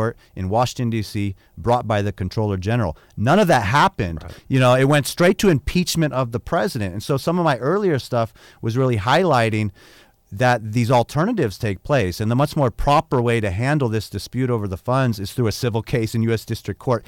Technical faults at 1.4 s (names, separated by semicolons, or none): hard clipping